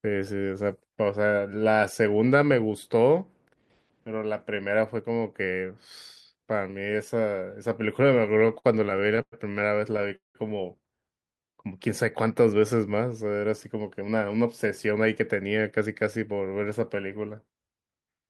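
From 8.07 to 9.34 s the speech breaks into repeated stalls (stutter): fourteen short hitches, the longest 107 ms, fill about a fifth of that stretch. Packets arrived later than the player consumed them, so its jitter buffer kept running dry, and it held the last sound until audio resumed. A second burst from 9.92 to 10.37 s has five gaps, one lasting 187 ms, and concealment fills about half the span. Unlike packet loss, nothing is dropped here. The 278 ms and 225 ms of filler only delay what follows, so the speech drags rather than skipping.

Between 11.19 and 11.53 s a jitter buffer slow-down follows. To rebuild its reserve, the receiver repeated single pitch periods, adding 76 ms and playing that passage at 80 % speed. The speech sounds drawn out while its pitch stays put, which separates this from a sagging playback clock, where the pitch would drop along with the tempo.

Two jitter buffer speed-ups come next, from 13.36 to 14.45 s at 109 % and from 14.91 to 16.26 s at 108 %. 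Each trims roughly a tenth of a second. Once the buffer held more audio than its target, the receiver cut out whole pitch periods to lower the delay. The speech sounds hurried but keeps its normal pitch. That marks it as time-compression rather than a fast sample clock, which would also raise the pitch.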